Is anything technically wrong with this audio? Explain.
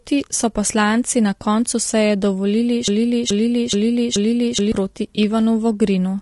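Yes, there are three problems.

Throughout the speech, the audio was likely carried by low-delay AAC compression (AAC-ELD) at a low bitrate, which fits roughly 32 kbps. Its short analysis frames cannot separate the harmonics of the voice cleanly, and the limited bits leave quantisation noise filling the gaps between them. The result is plainly audible: the speech sounds rough and grainy, and the upper frequencies have a thin, artificial character.

From 2.88 to 4.72 s, right after "na koncu seje dovolili", there is a broken-record loop. The likely cause is that the playback or stream stalled and kept resending the last fragment it held. A 427 ms piece repeats four times, back to back and identically, so the sound stutters mechanically. The speech that should have filled those 1.8 seconds is missing.

From 5.15 to 5.18 s there is an AAC frame loss with concealment. A stretch of about 20 ms, consistent with a single lost frame, never reached the decoder, so it rebuilt the gap by extrapolating from the last good spectrum. 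Because the loss is so short, the speech does not fade out. Instead you hear a brief smeared or noisy blip where the detail of the signal blurs for an instant.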